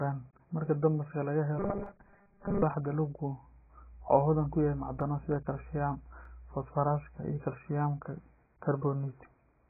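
Speech, and it's been squeezed hard the whole way through. The top end is cut away, so everything sounds dull, with smeared consonants and a fizzy, warbly edge on sibilants and held vowels. That's the classic signature of heavy AAC compression, likely AAC-LC at a very low bitrate in the region of 12 kbps. The encoder pulled the cut-off way down and quantised what's left so coarsely that the texture goes watery. Between 1.60 and 2.62 s there's a stretch of robotic sound from repeated short buffers. The audio turns into a stiff metallic buzz at 200 Hz that still loosely follows the speech. That pitch fits a tiny 5 ms chunk being replayed over and over while the real audio gets skipped, likely because fresh audio wasn't arriving in time, and most of that window is repeats rather than real signal. On top of that there are three sharp single clicks at 1.86, 5.01 and 6.25 s, the first landing inside the buzzy stretch. 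Those are dropped samples: the waveform jumps where a sliver of audio, a tiny fraction of a millisecond, has gone missing. That's far too short to lose any sound, but it's enough to leave a hard tick, likely a stream glitch dropping a handful of samples.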